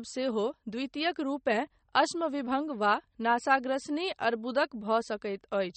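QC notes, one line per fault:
Throughout, MP3 compression: the encoder likely ran short of bits, with damage consistent with a rate around 32 kbps. Weak frequency lines were dropped and returned from frame to frame, which makes the speech sound watery and swirly, and attacks smear. The treble was cut so that nothing remains above 8.4 kHz, which dulls the top of the sound and takes the crispness out of s sounds. The codec damage is plainly audible across the whole clip.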